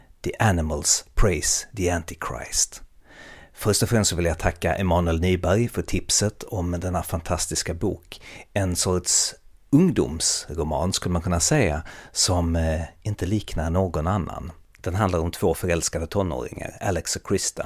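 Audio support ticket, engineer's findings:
No audible faults found; nothing to escalate.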